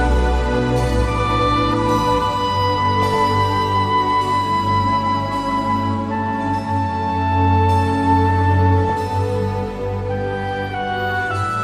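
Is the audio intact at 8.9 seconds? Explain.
No, not quite. From 8.85 to 8.93 s there's a burst of DAB burbling: bit errors slipped past error correction and put short blips of noise into individual sub-bands. Underneath, the whole clip has MP2 compression, likely from a low rate around 80 kbps, so it sounds dull and plainly gurgly with upper bands dropping out.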